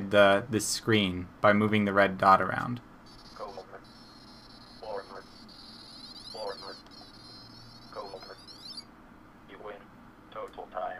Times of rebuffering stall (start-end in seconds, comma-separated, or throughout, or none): none